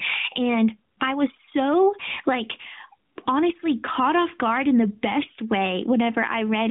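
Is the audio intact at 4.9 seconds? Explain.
No. Gain pumping runs throughout, including at 4.9 s. Quiet parts swell in pauses and duck around 20 dB under loud sounds, likely from a fast limiter fighting excessive gain.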